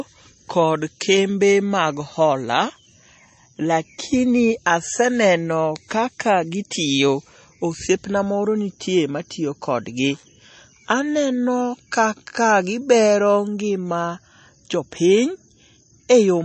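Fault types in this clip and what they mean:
MP3 compression: the speech has a hard treble ceiling, with nothing above about 8.3 kHz, and plainly audible watery, swirly texture as weak spectral lines drop in and out between frames. That points to a likely low-bitrate encode, around 32 kbps.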